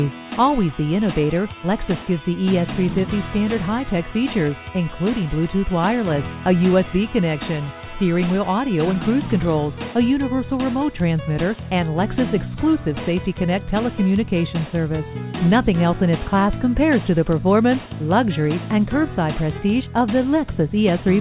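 No faults can be heard: the signal carries the narrow telephone bandwidth of the call path, with nothing above about 4 kHz, which fits G.711 A-law coding at 64 kbps.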